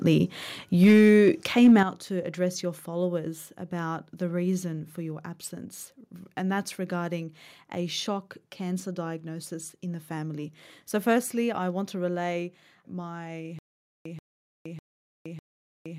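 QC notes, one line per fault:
0.83–1.29 s and 1.57–1.80 s, microphone overload: the loudest stretches turn harsh and crackly because their peaks are flattened at the converter's ceiling. The first run is pushed about 4 dB past the limit, the second about 2 dB, with the tops of several percent of the waveform sheared off. The likely cause is input gain set too high. Unlike codec or loudspeaker distortion, the grit appears only on the peaks, and the quieter sound around them stays clean.
0.84 s and 1.83 s, microphone volume stepped down: the whole level drops at once, by about 3 dB at 0.84 s and about 9 dB at 1.83 s. Each step comes right on or after an overloaded peak, which points to call software likely cutting the device's input gain in response to clipping. Unlike a compressor or fade, the drop is instant and doesn't recover, and the background falls along with the foreground.
13.59 s to end, stutter with silent gaps: a fragment of about 134 ms plays, then about 467 ms of dead digital silence follows. 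The cycle repeats every 600 ms, four times, through to the end, and the content that belonged in those gaps is lost. The likely cause is a stalled stream replaying its last buffer on each retry. A plain dropout only goes silent, but here the same short burst comes back identically at an even pace.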